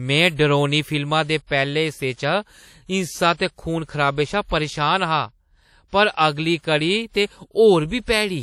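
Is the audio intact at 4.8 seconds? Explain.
No. Likely WMA compression, present throughout, fitting about 48 kbps: long transform blocks smear quantisation noise, so the speech sounds ringing and washy, with breathing hiss.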